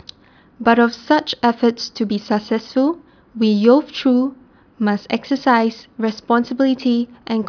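Nothing in this recording of speech stood out as a technical problem on listening.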